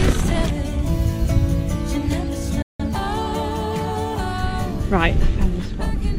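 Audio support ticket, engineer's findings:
Abrupt mute at 2.62–2.84 s, a near-instant 3 ms fade into silence, then the programme resumes with about 0.17 s of material missing. Digital broadcast dropout: the receiver muted on failed or lost frames, consistent with roughly four frames. Probable component is the demodulator/decoder error-handling path.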